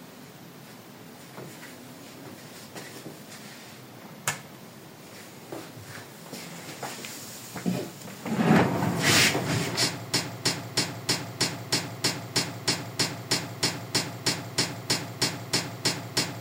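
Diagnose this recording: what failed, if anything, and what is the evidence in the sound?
Playback or streaming most likely stalled at about 10.14 s, with the buffer left holding one fragment and replaying it instead of fetching new data. The result is a broken-record loop: a 0.32 s slice of sound repeats exactly, back to back, about 20 times, and runs all the way to the end of the clip. The identical repeats point to a stuck buffer rather than anything in the source, and whatever should have followed 10.14 s is gone.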